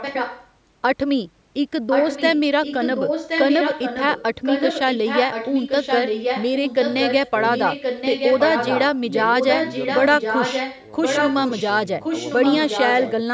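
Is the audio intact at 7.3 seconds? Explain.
No. The speech there carries an echo leak, running from 4.43 to 7.31 s: a delayed copy of the voice returns about 1.07 s late and only a little quieter, likely from a loudspeaker whose echo canceller failed to remove it. Unlike room reverberation, it's a distinct repeat, not a smear.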